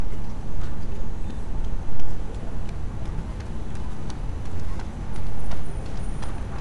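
No technical fault can be heard anywhere in this recording of sounds. There is nothing in it to single out or time.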